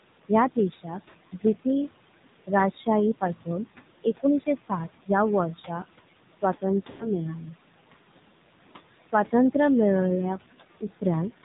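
Throughout, the AMR narrowband mobile codec is plainly audible. Everything above 4 kHz is gone, so the speech sounds boxed in and dull. The codec rebuilds the voice from a vocal tract model and a few pulses per short frame. At this low rate the result is buzzy and synthetic, which fits a bitrate near 7.4 kbps. The room noise sits about 13 dB under the speech and turns into a swirling warble.

Noise suppressor artifacts also run through the whole clip. The suppressor pulls down bands it judges to be steady noise, about 19 dB at most. Between phrases the background sinks away. Under the speech it comes back. What survives flutters and warbles, and the voice has a thin, watery edge.

From 0.29 to 1.94 s, speech is cut by the noise suppressor. It mistakes parts of the speech for noise and turns them down with the background, by up to about 18 dB. In total, roughly 0.4 s is affected. Soft consonants and word endings sound swallowed or faint.

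Inside that stretch, at 1.10 to 1.16 s, lost AMR speech frames cause a brief dip and warble. About 40 ms goes missing, which fits two dropped 20 ms frames. The decoder repeats its last good settings with falling gain, then recovers.

From 2.47 to 3.48 s, the suppressor cuts speech again, by up to about 14 dB. The affected parts total roughly 0.2 s, and quiet sounds there turn faint.

From 4.04 to 7.54 s comes the longest run of speech cut by the noise suppressor. The drop reaches about 22 dB, and roughly 0.7 s is affected in all. Several syllable edges sound swallowed.

Within it, from 6.90 to 7.12 s, lost AMR speech frames cost about 100 ms, which fits five lost frames in a row. The sound is drawn out and fades toward silence. When the voice returns, it is weak and rough for a moment.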